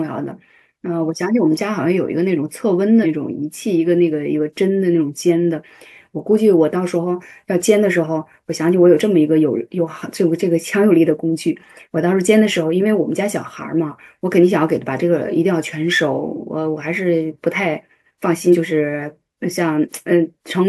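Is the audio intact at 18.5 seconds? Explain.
No. Around 18.52 to 18.56 s, compressed frames were skipped, about one 42.7 ms frame, so the speech jumps ahead by about 40 ms at the join.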